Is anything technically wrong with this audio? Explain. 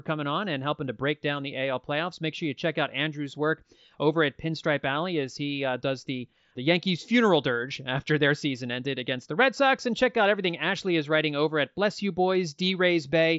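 No, nothing is technically wrong.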